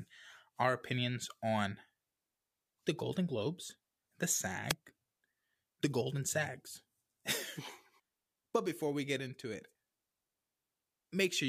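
Speech clip with a wireless microphone noise hit from 4.68 to 4.74 s: the FM radio signal fades as reflections cancel, so receiver noise rises over the audio.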